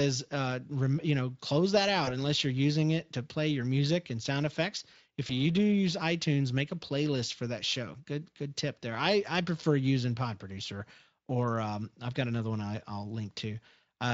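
At 2.05 to 2.10 s and again at 5.27 to 5.35 s, VoIP packet loss concealed by the speech codec causes brief buzzy or noisy smears. Each fits one lost 20 ms frame. The decoder extrapolates, then recovers slowly under the light Speex coding.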